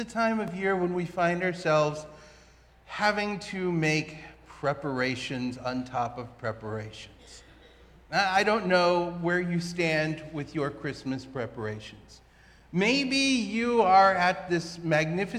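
At 0.48 s a block of digital silence drops about 1.3 ms of audio to zero, likely a 64-sample buffer left unfilled in time, heard as a single tick.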